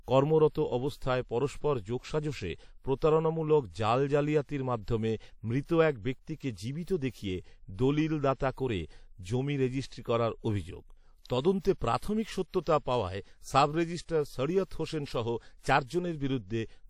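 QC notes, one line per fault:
Throughout, WMA compression: plainly audible washy ringing and breathing hiss on the speech, likely a transform codec smearing noise at around 48 kbps; nothing above 19.9 kHz.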